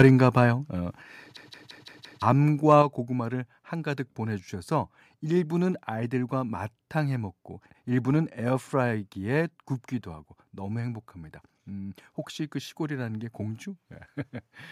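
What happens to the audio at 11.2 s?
Nothing goes wrong at 11.2 s; the speech continues cleanly through that moment with no dropout, click, distortion or other audible fault.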